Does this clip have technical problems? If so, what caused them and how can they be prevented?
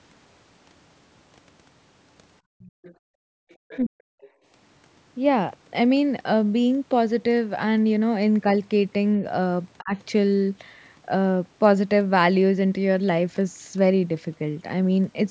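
Yes. Between 2.41 and 3.49 s, the echo canceller clamped the microphone while the loudspeaker played. This is background gated by the echo canceller: the room sound drops out for roughly 0.7 s in total, falling by about 40 dB at its deepest. Tuning the canceller to attenuate more gently, or using a less aggressive suppression mode, prevents this.

The canceller likely failed to subtract all of the loudspeaker signal, so the other side's voice leaks through at 2.59–2.95 s, 3.49–3.78 s and briefly at 4.23–4.28 s. It comes through as faint scraps roughly 20 to 30 dB below the talker. Headphones or better echo-path modelling would keep it out.

At 3.82–4.23 s and 9.81–9.93 s both sides were talking at once. The canceller likely could not separate the talker from the echo and turned everything down. The result is speech suppressed in double talk: the voice sinks by roughly 30 to 40 dB in short pieces. 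Better double-talk detection, or headphones, would prevent it.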